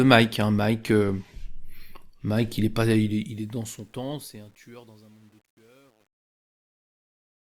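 From 2.98 s, just after "il est pas", the fade-out shows truncation distortion on a fade. The gain stage quantises coarsely without dither, which fits a 10-bit path, so the tail turns grainy, worst from 3.94 s to the end at 7.46 s.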